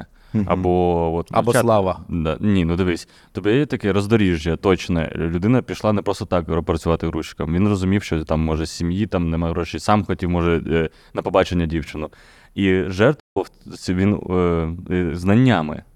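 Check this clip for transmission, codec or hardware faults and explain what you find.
There's one fault, a playback stall near the end of the speech. At 13.19 s the sound cuts out mid-flow and stays silent for about 160 ms before resuming at 13.37 s. The player likely ran out of buffered data or had its thread blocked, so output just halted until it caught up.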